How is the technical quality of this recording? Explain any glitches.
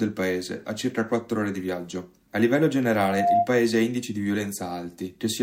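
A loudspeaker feedback squeal spoils the recording from 2.97 to 3.49 s: the microphone hears its own loudspeaker, and at 699 Hz the loop gain tops one. That tone swells over about a third of a second to roughly 5 dB above the surrounding sound. The gradual build-up is what separates it from a steady interfering whistle.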